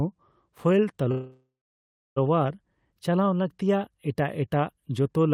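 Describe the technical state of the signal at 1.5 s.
At 1.5 s the signal sits inside a call audio freeze running from 1.11 to 2.18 s. The likely cause is delayed packets draining the jitter buffer, so the last sound is stretched into a fading buzz, then about 0.68 s of silence. Speech resumes intact but roughly 1.05 s late. On a spectrogram this shows as static horizontal bands that fade into a blank region, and on a waveform as a decaying envelope that flattens into silence.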